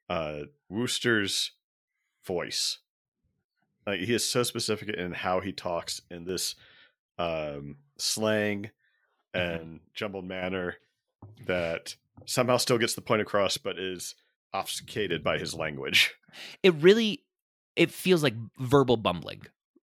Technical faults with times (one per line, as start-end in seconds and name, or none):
5.92-6.29 one channel drops out
9.57-10.42 one channel drops out
13.58-15.11 one channel drops out